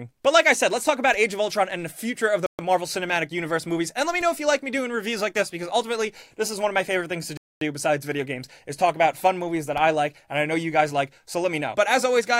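At 2.46 s the audio drops abruptly to silence for about 126 ms, returning at 2.59 s, and at 7.37 s a longer gap of about 241 ms follows before sound resumes at 7.61 s. These hard dropouts are most likely a Bluetooth stall: radio interference delayed packets on the wireless link, the receiving headphones' buffer emptied, and playback halted until the retransmitted audio arrived.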